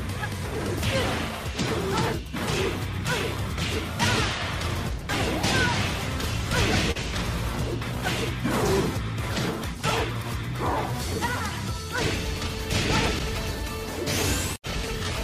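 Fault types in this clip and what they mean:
Short concealed packet loss: a brief smear near 6.91 s, where about 40 ms of audio never arrived in time and the receiver filled the gap by extending the preceding sound.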